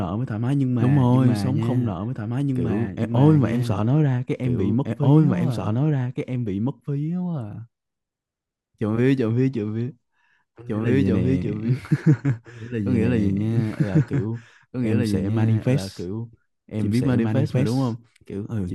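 From start to finish, the speech has a doubled audio track. A second, equally loud full-band copy trails about two seconds behind, dry and flat. Likely a second capture path.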